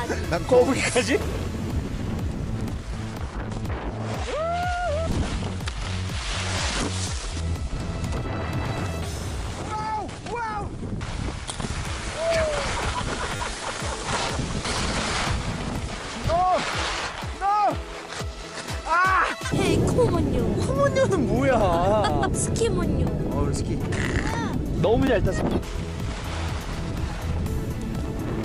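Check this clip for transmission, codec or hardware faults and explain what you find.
The clip has one fault type, a repeated buffer, at 11.69 s, 13.36 to 13.4 s and 25.07 s. When new audio arrived late, the device replayed its last short block, which fits a 10 ms buffer. The first and last give a single click-like double; the middle repeats four extra times, a brief buzzing stutter that drops roughly 40 ms.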